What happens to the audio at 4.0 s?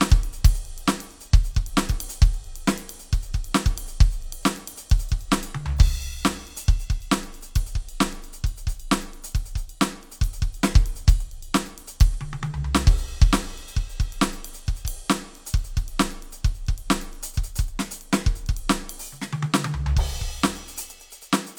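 Nothing goes wrong at 4.0 s: the music plays through that moment intact, with no dropout, click or other fault.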